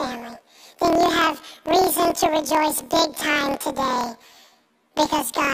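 Throughout, planar audio is read as interleaved. Each 26 ms block plays twice at double speed, so the speech sounds an octave high with a flutter at the 38 Hz block rate.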